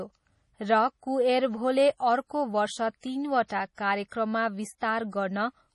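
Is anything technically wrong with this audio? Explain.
Yes. Two faults can be heard in this speech.

MP3 compression damage runs throughout. It is heavy and most likely from the MP3 encoding. Nothing reaches above 11.5 kHz, so the top end sounds dull. Weak frequency lines flicker in and out between frames, giving a watery, swirly texture. The s sounds turn metallic. That degree of damage fits a low bitrate of around 32 kbps.

Pre-echo appears from 4.08 to 4.12 s. A sharp attack falls late in a coding block. The noise meant for the loud part then spreads back over the quiet gap before it. This gives a short hiss about 36 ms long ahead of the onset, and the attack itself sounds smeared.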